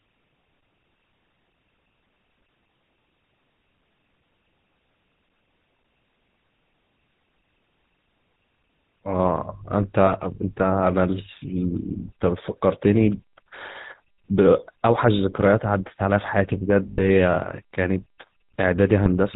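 The speech was encoded with the GSM full-rate codec, whose sound fits its 13 kbps rate: the vocal tract is modelled and driven by sparse regular pulses, with nothing above 4 kHz, leaving a plainly audible buzzy, gravelly roughness and a dull top end throughout. There are lost GSM frames at 10.06–10.14 s, 16.90–17.09 s and 19.04–19.09 s, where the decoder repeats the settings of the last good frame. Each gap rings roughly and metallically. The middle one lasts longest, fitting about 80 ms of missing audio, and the others fit single 20 ms frames.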